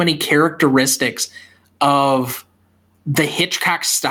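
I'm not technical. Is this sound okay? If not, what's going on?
No. Throughout the clip loud and soft parts end up close in level, so the sound feels squashed. This is gain pumping, likely from the microphone level being set far too high, so an automatic level control keeps pulling it sharply down and letting it back up.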